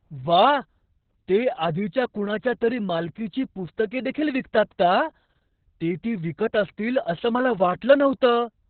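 It's a speech clip, and it's been through Opus voice compression pretty hard the whole way through. Nothing survives above about 4.5 kHz, so it's squeezed to telephone-style narrowband, and the voice comes out muffled, hoarse and a bit robotic. That's SILK's linear-prediction coder starved of bits, coding the excitation very coarsely. The damage level points to something around 6 kbps, likely with long 60 ms frames.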